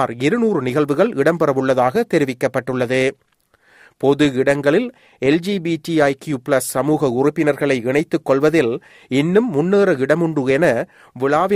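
No technical faults can be heard anywhere in the recording, and the signal holds steady with nothing breaking into the sound.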